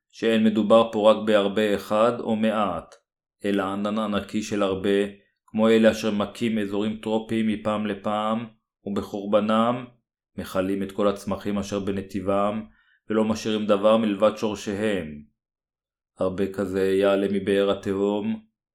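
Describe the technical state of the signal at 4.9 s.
At 4.9 s the signal is intact, with no audible fault at that point in the speech.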